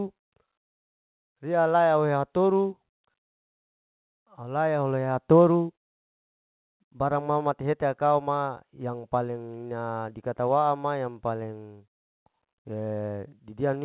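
Nothing goes wrong anywhere in this speech clip; it has simply come through a call path whose band stops at about 4 kHz, which fits an ordinary narrowband telephone codec such as G.711 mu-law.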